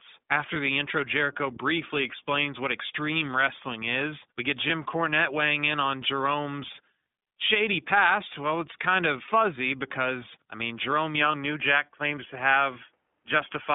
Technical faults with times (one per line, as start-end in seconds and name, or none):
0.00-13.74 iLBC codec
0.54-0.56 lost iLBC frames
4.68-4.71 lost iLBC frames
9.26-9.29 lost iLBC frames
11.21-13.74 input switched to a poorer device
11.32-11.35 lost iLBC frames